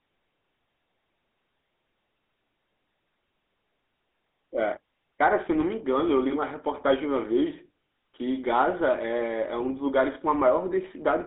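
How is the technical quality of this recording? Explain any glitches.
The recording has clearly degraded technical quality, carrying plainly audible codec damage from start to finish.

GSM full-rate codec, throughout: the speech has passed through the original GSM phone codec, consistent with a 13 kbps full-rate stream. It reduces the voice to a vocal-tract filter excited by a coarse, regularly spaced pulse train, so fine detail in the excitation is lost. The result is a buzzy, gravelly roughness. The line band runs roughly 250 Hz to 3.6 kHz, with nothing above 3.9 kHz.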